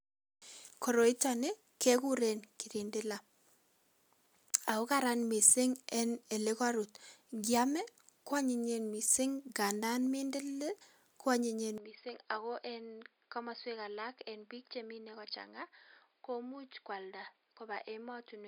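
From 11.78 s, speech turns dull, with nothing above 5 kHz, quieter and with new background noise: likely an input switched to a poorer device, not mere filtering.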